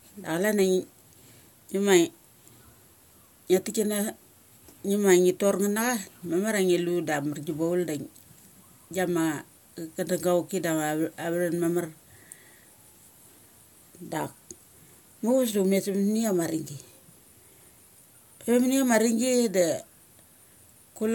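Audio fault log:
Nothing to log here; the speech runs along without a single thing worth flagging.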